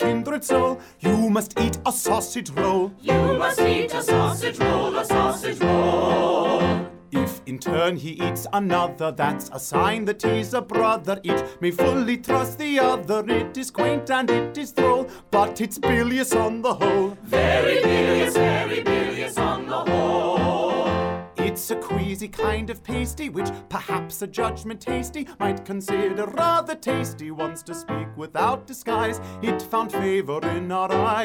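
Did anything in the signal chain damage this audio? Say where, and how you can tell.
Yes: clock slip clicks, 0.11 to 31.24 s, a soft rattle of single-sample slips about fifty per second, likely from unsynchronised converter clocks roughly 0.1 percent apart.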